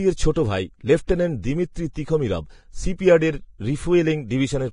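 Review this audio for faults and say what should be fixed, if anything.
Heavy Vorbis compression, likely at around 29 kbps, coarsely quantises the treble and cuts everything above 10.5 kHz, so the speech sounds dull, hissy and grainy throughout.

Pre-echo: the codec spreads block-wide quantisation noise ahead of sharp attacks, putting brief hiss before onsets at 0.33–0.36 s, 1.07 s (after "ছোট ভাই", before "দিমিত্রি তিখোমিরভ") and 1.93–1.96 s.

Encoding at a higher bitrate, or with a lossless format, would prevent both problems.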